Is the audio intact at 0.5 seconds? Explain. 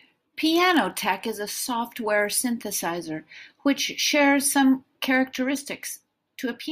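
No, there is a block size mismatch (padded) from 0.00 to 1.28 s, ending just before "is a software synthesizer". Each 1024-sample block read downstream holds a zero-filled gap after shorter written data, giving a 43.1 Hz buzz at the block rate. Speed and pitch stay essentially normal.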